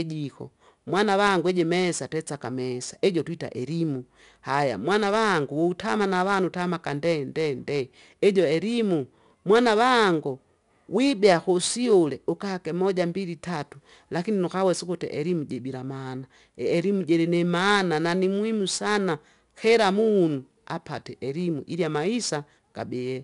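4-bit ADPCM compression runs through the whole clip. Each speech sample is stored as a coarse 4-bit step from a predicted value, with the step size adapting as it goes, so the error rides up and down with the level. It is plainly audible as a gritty hiss clinging to every louder syllable, with roughness on sharp onsets. Nothing reaches above 10.6 kHz, which fits a data rate of roughly 89 kbps.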